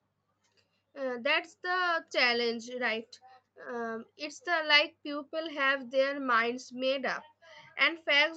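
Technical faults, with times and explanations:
No technical faults are audible.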